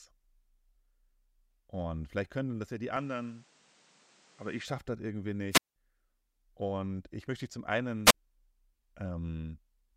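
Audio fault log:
2.97–4.65 s, likely input switched to a poorer device: after "können das ja die" the sound narrows, nothing above 9.6 kHz, with a new noise floor about 35 dB down, no gap or level jump; full band returns by "schaffe das irgendwie".
5.51–5.76 s and 8.05–8.14 s, wireless microphone squelch dropout: RF fade lets hiss rise, then the receiver mutes for 186 ms after "schaffe das irgendwie" and 39 ms after "ich möchte dich zum".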